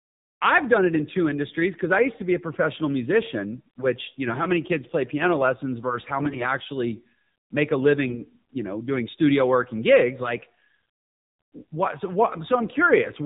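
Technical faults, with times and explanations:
throughout AMR narrowband mobile codec: the speech has nothing above 4 kHz and sounds buzzy and synthetic, which fits AMR-NB at about 7.4 kbps. Unlike a plain low-pass, the voice itself is rebuilt from a vocal-tract model and pulses, so its texture changes, not just its brightness.
6.20–6.44 s and 8.08–8.25 s AMR bit errors: after "piano lessons versus how" and again after "actually make a", the voice turns hoarse, scratchy and gargly while keeping its pitch and level. Flipped bits misplace the excitation pulses. Unlike packet loss, there is no gap or smoothed-over repeat.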